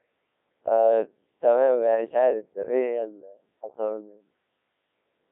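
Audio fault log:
throughout Codec 2 vocoder: the speech is rebuilt from sine waves, so it sounds robotic and buzzy. This fits about 1.6 kbit/s. Nothing above 3.8 kHz.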